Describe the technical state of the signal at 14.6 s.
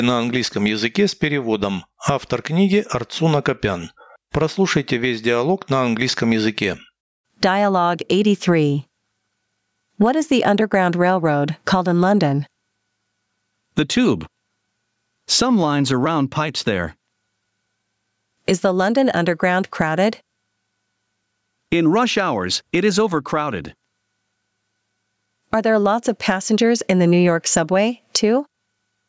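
At 14.6 s the speech shows gain pumping, as it does for the whole clip. The gain swings by around 15 dB, so loud and quiet passages sit unnaturally close in level and the result sounds squashed. The likely cause is microphone gain set far too high, with a fast limiter or compressor clamping down on every peak. The call-style processing above it, with nothing above 8 kHz, is normal.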